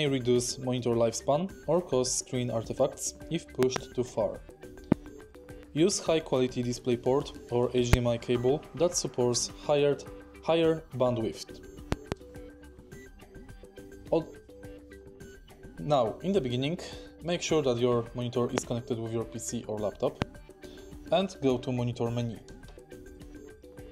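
Loud pops strike six times. Double pops span 3.63–3.78 s and 11.92–12.14 s. Single pops hit at 4.92–4.94, 7.93–7.96, 18.58–18.60 and 20.22–20.24 s. Each is a sharp thump roughly 20 to 25 dB above the sound, which continues underneath. A sudden voltage spike, likely from static or a switch, causes them.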